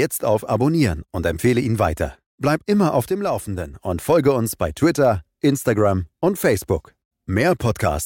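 Right after "immer auf", at 3.03 s, the level suddenly sags by about 6 dB and stays down until 3.73 s, coming back just before "und folge uns bei". That's most likely one channel dropping out of a stereo feed: with only one side left, the mono sum loses half of what both channels shared, so the speech just gets quieter for that stretch, then snaps back to full level.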